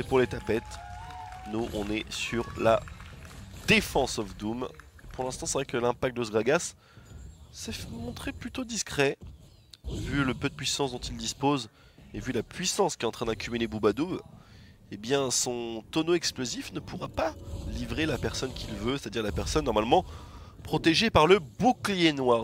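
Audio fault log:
Nothing stood out on listening.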